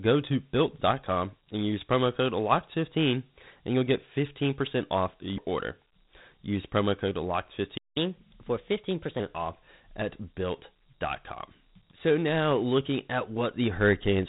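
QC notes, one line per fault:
Throughout: Dialogic VOX ADPCM. The speech carries a gritty, grainy hiss that rides along with it, and the band stops near 3.9 kHz, so everything sounds boxed in and telephone-like. The damage is plainly audible. This is 4-bit adaptive differential coding, where each sample is guessed from the last and only a coarse correction is stored. The band limit and grain fit 8,000 samples a second at 32 kbps, the usual voicemail and phone-menu format.
7.77–7.97 s: playback stall. The speech cuts out mid-flow and the output goes silent for about 180 ms, a gap long enough to read as a dropout rather than a natural pause. It then resumes where it broke off, with nothing skipped. The likely cause is the player running dry of data or its thread being blocked, leaving nothing to output until the buffer refilled.
7.97–9.20 s: catch-up at higher speed. Right after the gap, starting at "off at", the speech runs hurried and raised in pitch, playing at 1.15 times normal speed and sitting about two semitones high, before settling back to normal by 9.2 s. 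The player is resampling its backlog faster to recover the time lost in the stall, and because speed and pitch are tied together in resampling, both rise together.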